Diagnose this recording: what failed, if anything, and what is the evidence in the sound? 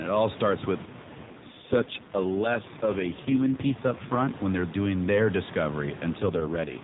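The fault sits in the network-codec handoff: an AMR rate drop. From 0.86 to 4.36 s, and again from 6.20 s to the end, the speech goes rougher and more synthetic, with a buzzy edge. There's no gap and the narrowband ceiling doesn't move, which fits the AMR-NB codec being told to step down from 12.2 to 4.75 kbps. A weak radio link makes the network spend bits on error protection, leaving a thinner model of the voice.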